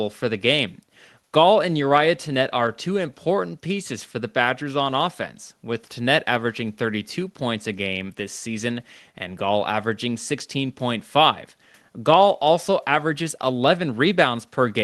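No technical faults are present; the speech has passed through a WebRTC call path working as expected, with an audible top end near 12 kHz and the usual coding texture of a low-bitrate Opus setting around 20 kbps.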